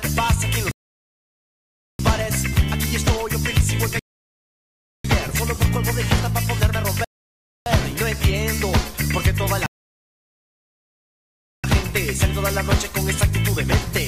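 Rebuffering stalls interrupt the audio at 0.71 s, 3.99 s, 7.04 s and 9.66 s, lasting 1.28 s, 1.05 s, 0.62 s and 1.98 s. Each time the player runs dry, drops to silence until more data arrives, then resumes exactly where it stopped.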